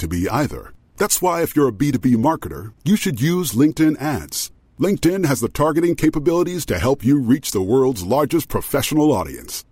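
Speech, with no audible faults.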